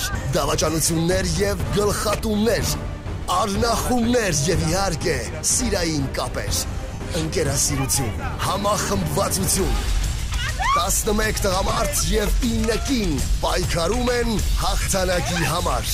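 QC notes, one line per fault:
6.94–7.01, 11.67–11.79 and 14.82–14.87 s, lost LE Audio frames: three short dropouts of about 68, 75 and 45 ms. The middle one is broken up over 120 ms, with the longest stretch around 40 ms. The LC3 decoder fills each gap by repeating the last spectrum with scrambled phase, so steady sound turns into a brief noisy smear, not a click. The gap lengths fit the codec's 7.5 ms frames.
throughout, lossy compression: light codec damage, which is normal.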